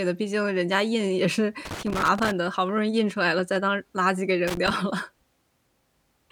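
A speech recording with loose connector crackle in two bursts, from 1.65 to 2.32 s and again from 4.48 to 4.71 s. That irregular scratchy crackling is a worn or dirty contact shifting, so the signal keeps cutting in and out.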